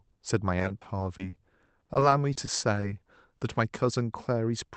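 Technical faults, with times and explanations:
0.59–2.84 s, repeated packet loss (robotic sound): about twenty brief dropouts, none longer than 40 ms, are each bridged by stretching the preceding sound, so roughly a fifth of this stretch of speech is synthetic fill. That gives a choppy texture with gaps.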